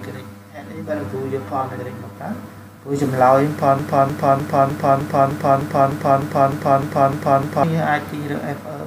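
For the first 2.16 seconds the audio sounds hollow and phasey, with a colour as if heard through a tube. This is channel delay (comb filtering). One channel runs late by around 10 ms, and when the two are summed to mono, the shared content cancels at evenly spaced frequencies, starting near 50 Hz, cutting a row of fixed notches into the spectrum. From 3.79 s to 7.63 s a broken-record loop takes over. A fragment of about 0.30 s repeats exactly, back to back, 13 times, a stuttering, mechanical cycle lasting nearly four seconds. The likely cause is a player, encoder or stream that stalled and kept resending the last piece it held, so the audio that should have played in that stretch is lost.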